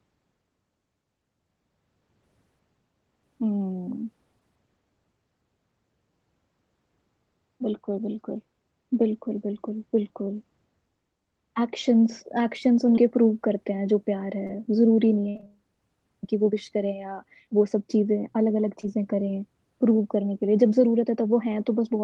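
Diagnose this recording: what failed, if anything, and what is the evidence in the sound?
Short concealed packet loss, at the network stage with jitter-buffer concealment in the Opus call path: brief smears at 12.95–12.99 s, 14.47–14.51 s and 18.81–18.85 s. In each, about 20 ms never arrived, and the decoder extended the last pitch or noise. On a spectrogram, harmonics run flat, then crossfade back.

Repeated packet loss (robotic sound) from 15.29 to 15.50 s: four gaps, the longest 59 ms, with over half of that span synthesized. Each patch repeats the preceding waveform, giving choppy sound. The waveform shows copied periodic cycles, and the spectrogram shows smeared harmonic bands breaking off abruptly.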